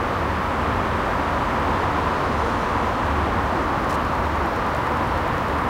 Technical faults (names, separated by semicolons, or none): Wi-Fi interference